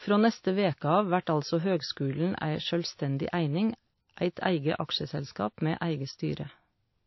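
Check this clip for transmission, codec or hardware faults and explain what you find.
One codec fault runs through the whole speech clip: transcoding between lossy codecs. There is nothing above 5.8 kHz, and two layers of compression smearing are heard together, which fits a low-rate MP3 near 28 kbit/s likely re-encoded as WMA near 48 kbit/s. The second encoder wastes bits reproducing the first one's artefacts. On a spectrogram, energy stops sharply at 5.8 kHz, with patchy, blocky gaps below.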